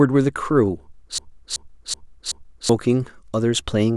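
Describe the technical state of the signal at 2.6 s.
A broken-record loop is running at 2.6 s, close to its end: from 1.18 s to 2.69 s the same 0.38 s fragment of speech plays back to back four times, each repetition identical. The likely cause is a player, encoder or stream that stalled and kept resending the last piece of audio it held. Whatever speech belonged in that stretch never arrives, so normal audio resumes only after 2.69 s.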